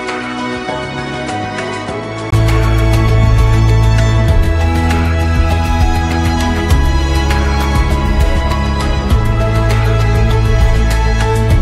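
For the first 2.32 s, the input has likely switched to a poorer device that passes nothing above 10.2 kHz. The sound is duller, roughly 10 dB quieter and carries faint noise of its own, and a 20 ms gap marks the switch back.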